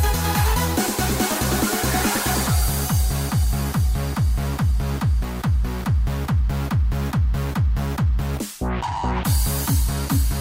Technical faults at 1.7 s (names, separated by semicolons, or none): none